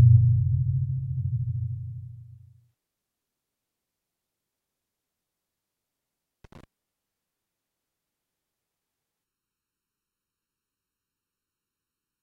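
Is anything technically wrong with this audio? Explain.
Yes, there are two problems. From 6.44 to 6.64 s there's a short burst of loose connector crackle, a worn or dirty contact chopping the signal into irregular scratchy crackle. From 9.24 s to the end you get channel delay (comb filtering): one channel lags by under a millisecond, and summing to mono notches the spectrum from around 700 Hz, so everything turns hollow and phasey.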